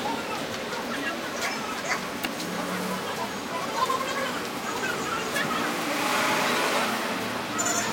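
Throughout, the audio is read two samples at a time, taking sample pairs as single frames, so everything plays at double speed, an octave higher.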